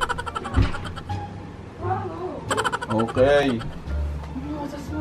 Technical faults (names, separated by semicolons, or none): clock drift buffer slips